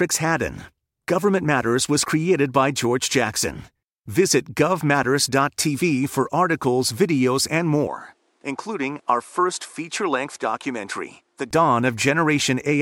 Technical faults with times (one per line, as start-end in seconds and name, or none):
7.87-11.51 input switched to a poorer device